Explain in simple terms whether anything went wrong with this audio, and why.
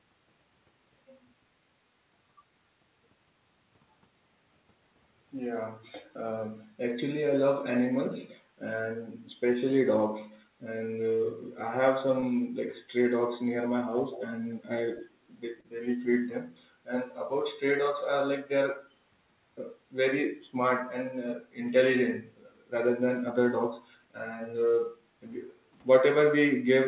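Twice, a small piece of the call arrived too late to be played: about 20 milliseconds at 12.20 s and about 40 milliseconds at 15.60 to 15.66 s. The receiver covered each gap by stretching the sound just before it. This short concealed packet loss comes across as a quick smear or wobble.

Between 13.93 and 15.07 s, in three bursts at 13.93 to 14.33 s, 14.58 to 14.63 s and 14.94 to 15.07 s, a repeat of the voice trails about 0.21 s behind it, strongest in the first burst. This is an echo leak, likely from a loudspeaker whose echo canceller let some sound slip back.

At 25.57 to 25.76 s, for about a fifth of a second, the echo canceller turned the microphone down while the loudspeaker played. This background gated by the echo canceller makes the room sound dip briefly before coming back.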